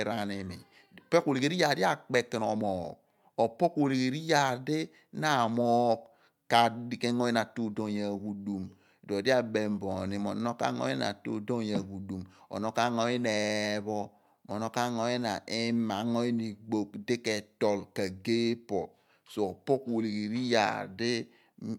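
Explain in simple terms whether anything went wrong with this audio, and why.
Nothing went wrong with this recording of speech. No technical faults show up anywhere in it.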